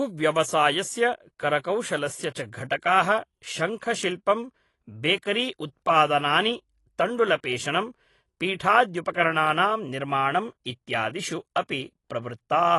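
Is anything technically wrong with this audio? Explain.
Yes. Throughout the speech the top end stops dead near 11.5 kHz, and sibilants and sustained sounds carry a watery, warbling fizz. That points to AAC compression, likely AAC-LC at a low bitrate around 32 kbps. The encoder starves and quantises frequency bands coarsely, leaving holes and substitute noise. A simple low-pass filter would only dull the sound without that swirl.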